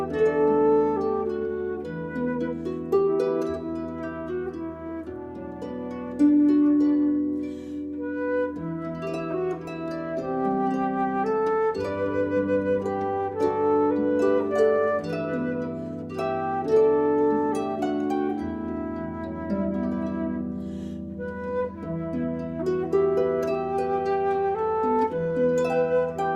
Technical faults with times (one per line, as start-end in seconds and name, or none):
none